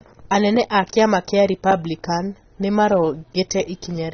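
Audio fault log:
throughout, AAC compression: the speech has likely passed through a low-bitrate AAC-LC encoder, around 24 kbps, which keeps each frame's frequency lines only as finely as a hearing model allows and spends nothing on the top band. Nothing is present above 6.5 kHz, so the speech sounds dull and muffled. The coarse quantisation is plainly audible as smearing, with a fizzy, warbling edge on sibilants and sustained sounds.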